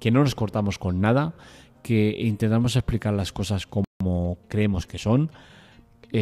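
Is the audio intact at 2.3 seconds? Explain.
Yes, the speech at 2.3 seconds plays through intact, with no fault at that moment.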